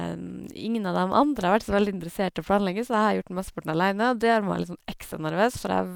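No technical faults can be heard anywhere in the recording of speech.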